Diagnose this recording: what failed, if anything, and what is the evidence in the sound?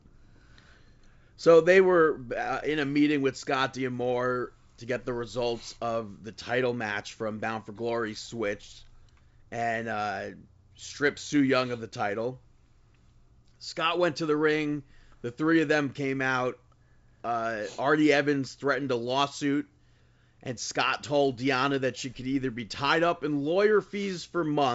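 Nothing failed; the wideband telephone coding behaves as designed.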